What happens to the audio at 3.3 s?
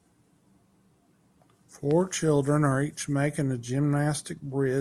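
Nothing goes wrong at 3.3 s: the speech there plays through intact, with no dropout, click, distortion or other fault.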